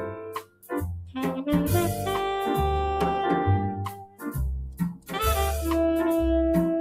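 From the start, a noise suppressor designed for speech is applied to this sound. It treats sustained, steady content as noise and lowers it, while sharp onsets pass largely intact. The result is a gain that keeps moving, with level swings of around 10 dB. Held parts sag and recover, giving a pumping, fluttering character and a thinner body than the source should have.

The instances of sound cut by the noise suppressor follow that pattern. From 0.04 to 0.72 s the level falls by up to about 20 dB, so the opening is pulled well down. A shorter dip from 1.01 to 1.16 s reaches about 11 dB. From 3.87 to 4.34 s the drop again reaches about 20 dB. From 4.65 to 5.16 s it reaches about 18 dB. In each case the sustained or decaying material sinks or its tail is cut short.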